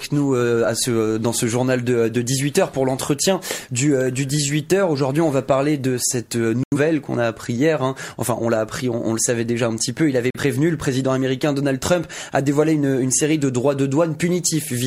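At 6.64 s the sound drops out until 6.77 s. At 10.31 s it cuts again, returning at 10.40 s. Each is a digital broadcast dropout. The receiver muted on failed frames, likely two, then one. The material sent during those gaps is gone.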